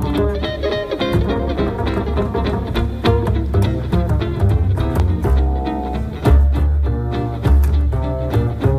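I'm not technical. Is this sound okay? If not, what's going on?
No. At 5.00 to 5.02 s there is one loud pop, a sharp click much louder than the sound. It is likely a brief electrical jolt, such as a plug or switch.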